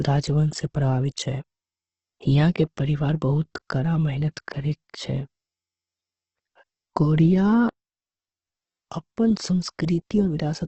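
Speech runs through the whole clip with heavy Opus compression damage, likely from a low-bitrate encode. Nothing sounds above 8.1 kHz, so the voice is dull and boxed in, while the remaining bands come out rough and grainy rather than swirly, which fits the music-style mode at a rate near 12 kbps. A spectrogram would show a flat ceiling at 8.1 kHz across the full length, with smeared, noise-filled texture instead of clean harmonic lines below it.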